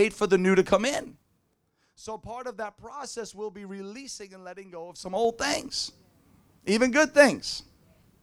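Speech, with zipper noise from 4.85 to 5.41 s, just after "be releasing and letting". The level moves by about 20 dB in unsmoothed steps of about 3 dB, around ten per second. Each jump clicks, so a ticking zip rides over the sound.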